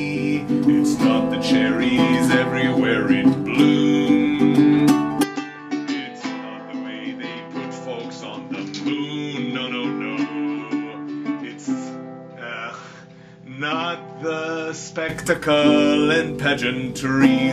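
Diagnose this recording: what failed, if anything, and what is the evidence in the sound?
From 5.23 to 15.09 s the sound turns dull, about 10 dB quieter, with nothing above 7.3 kHz. Likely an input switched to a poorer device.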